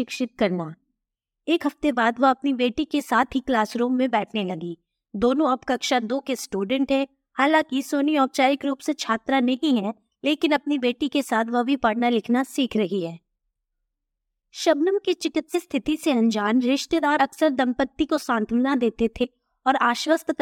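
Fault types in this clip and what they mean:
compressed frames skipped: the speech jumps ahead with a brief smeared blip at 15.54 s, 17.19 s and 19.23 to 19.25 s, losing roughly 100, 50 and 70 ms. Whole 23.2 ms compressed frames were never decoded, and overlapping neighbours soften each join.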